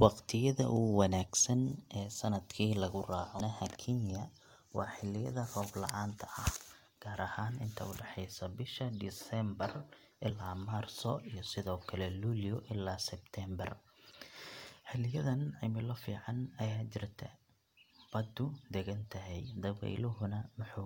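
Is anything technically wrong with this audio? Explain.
Yes. The speech carries three brief glitches from damaged data in a compressed stream, at 3.39 s, 10.29 s and 19.44 s. At each, corrupted bytes leave the decoder misreading a frame, so it loses sync and hunts for the next valid header. Each is heard as a chirp, squawk, click or short hole. On a spectrogram each shows as a thin vertical disturbance, and on the waveform as a brief break in the surrounding shape.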